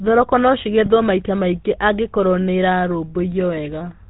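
The speech has passed through the GSM full-rate codec, which models the vocal tract and drives it with a sparse, regularly spaced pulse excitation, discarding much of the fine detail and everything above 4 kHz. The damage is plainly audible: the voice carries a buzzy, gravelly roughness throughout, and the dull, band-limited top end and coarse texture fit the 13 kbps full-rate coder rather than a newer, cleaner one.

From 0.86 to 0.89 s, a single frame was lost, about 20 ms of signal. The decoder filled the gap by repeating the previous good frame's settings. That repetition is heard as a brief rough, metallic ring where the sound hangs for an instant instead of moving on, just before "maita maingĩ angĩkorwo". It is too short to fade fully to silence.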